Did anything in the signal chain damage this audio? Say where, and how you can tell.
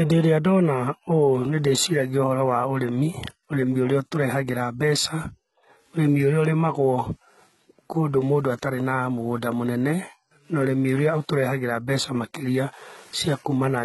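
Yes, at the codec stage, throughout the speech. S sounds turn gritty and metallic. Nothing is present above 11.8 kHz. This is likely HE-AAC compression at a very low bitrate, around 16 kbps. The treble is rebuilt from copied lower bands, so its harmonics misalign.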